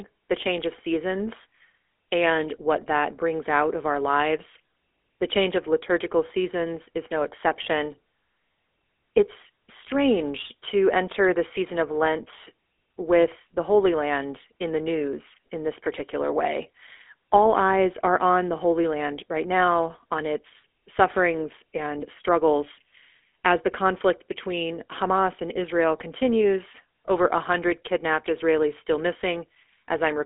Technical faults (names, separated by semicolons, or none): GSM full-rate codec